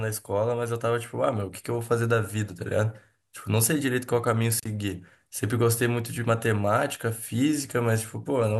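At 4.59 s the speech cuts out briefly, returning at 4.67 s. This is an intermittent contact. A loose cable or plug lost its connection for a moment, then made it again. The line was open for about 59 ms. You hear a short crackle as the contact breaks and another as it closes. In between, the speech is gone and only faint hiss remains.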